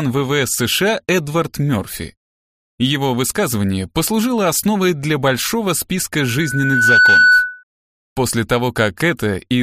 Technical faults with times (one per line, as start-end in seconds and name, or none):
6.16-7.63 loudspeaker feedback squeal